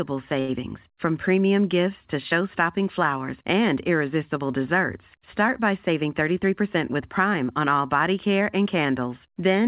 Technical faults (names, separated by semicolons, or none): short stall from a late packet; jitter buffer speed-up